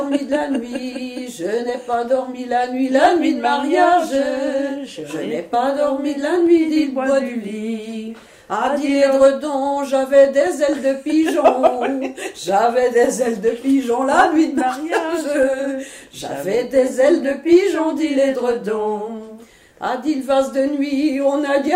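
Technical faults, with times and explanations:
No technical faults can be heard in this audio.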